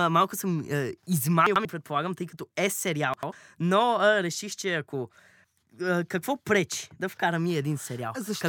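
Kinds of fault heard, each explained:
Frames out of order: two adjacent blocks of coded audio reached the decoder in swapped sequence and were played back that way, so a short stretch of speech runs with its halves exchanged. It happens at 1.47–1.65 s and again at 3.14–3.32 s, each swap spanning roughly two blocks of about 93 ms. Each sounds like a brief garbled flutter, and no time is lost overall.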